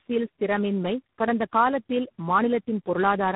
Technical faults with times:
0.00-3.35 tandem speech coding

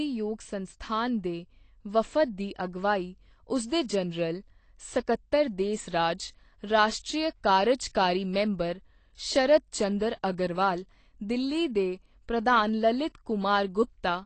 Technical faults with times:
0.00-14.25 AAC compression

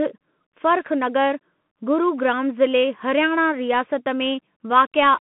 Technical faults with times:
0.00-5.22 Bluetooth CVSD headset codec

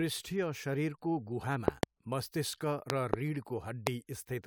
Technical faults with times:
1.68-1.85 loud pop
2.90-3.16 loud pop
3.87-3.89 loud pop

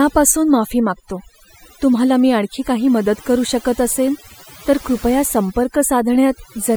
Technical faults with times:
0.00-6.77 overdone noise removal

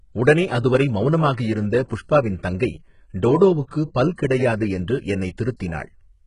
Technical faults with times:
0.00-6.26 HE-AAC compression
1.88-1.91 pre-echo

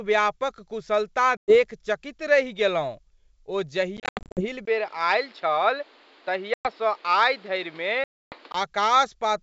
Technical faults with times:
1.37-1.57 packet loss on an ADPCM call
3.97-4.46 packet loss on an ADPCM call
4.65-8.54 input switched to a poorer device
6.54-6.68 packet loss on an ADPCM call
8.04-8.37 packet loss on an ADPCM call

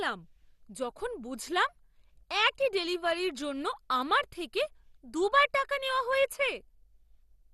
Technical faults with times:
0.00-7.54 MP2 compression

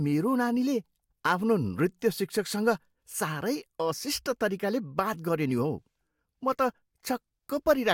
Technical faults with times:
none

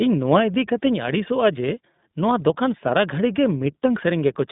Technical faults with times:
0.00-4.51 iLBC codec

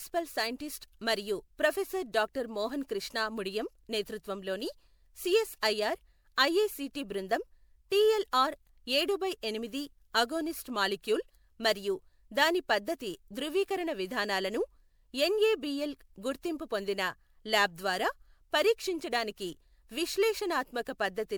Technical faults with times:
0.00-21.38 generation loss

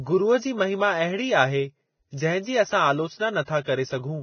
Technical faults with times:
0.00-4.23 Vorbis compression

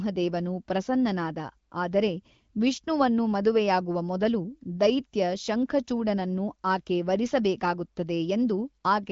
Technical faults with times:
none

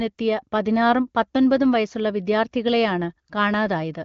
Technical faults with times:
none

